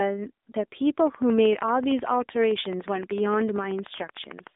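From the start the speech has the AMR narrowband mobile codec sound: a phone-line band of roughly 250 Hz to 3.7 kHz, nothing above 3.8 kHz, and plainly audible buzzy, synthetic coding damage, which fits AMR-NB working at a low rate of around 7.95 kbps.

From 1.00 s to 4.48 s there's a train of clicks: about fifty near-identical ticks at a steady 13.3 per second, peaking roughly 5 dB above the speech and ticking right through pauses. It's likely interference from nearby equipment or a struggling interface.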